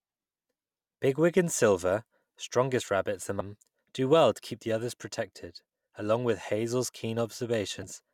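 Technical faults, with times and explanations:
3.39 s and 7.83 s, damaged data in a compressed stream: two short blips, each under 20 ms, the first falling between "strongest rabbits" and "do well to keep". At each point bytes of the encoded speech were corrupted, so the decoder could not read the affected frame correctly, lost its place in the stream and had to resynchronise on the next valid frame header, leaving a brief disturbance.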